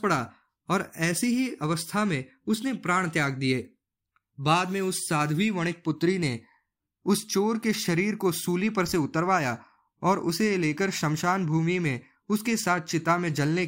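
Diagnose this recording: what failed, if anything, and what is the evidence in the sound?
Nothing failed here as far as I can hear: the speech runs without any dropouts, glitches, distortion or other breakdown at any stage of the chain.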